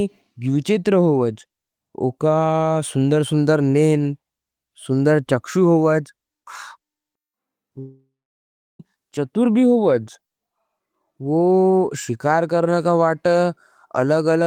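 It's a speech recording with one clear break: from 7.79 s to 8.81 s the sound stalls for about a second. Right at the start the last bit of sound gets smeared into a fading buzzy tail, then roughly 0.7 s of near silence follows before the speech picks up again, with that second simply gone. That's most likely a long network dropout, where packets stopped arriving and the receiver's concealment ran out.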